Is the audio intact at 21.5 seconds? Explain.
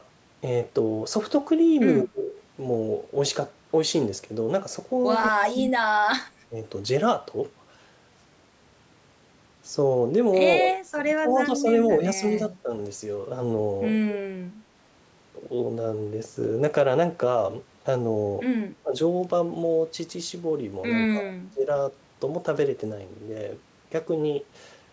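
No. From 21.09 to 21.68 s the speech is suppressed, most likely by speech suppression in double talk. The talker's level sinks, at its deepest by about 20 dB, and parts of the speech thin out or drop away for roughly half a second. This is the signature of an echo canceller during overlapping speech. It cannot tell the near talker from loudspeaker echo, so it pulls both down together.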